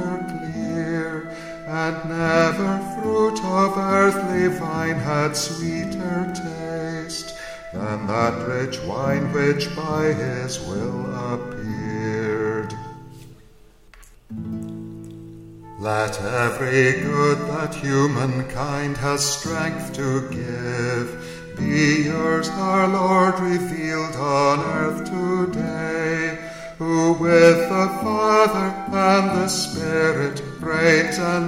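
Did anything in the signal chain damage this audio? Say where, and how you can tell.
No, nothing along the way left a mark on this one that I can hear, so there's no stage to point a finger at.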